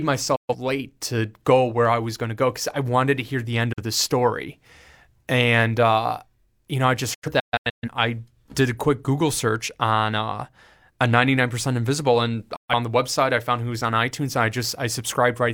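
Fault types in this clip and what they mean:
Digital broadcast dropout: the receiver lost usable frames and muted with a quick 8 ms fade until good data returned. The speech vanishes at 0.36 s, after "to hear the end" at 3.73 s, in scattered holes from 7.14 to 7.89 s, and before "the website I found".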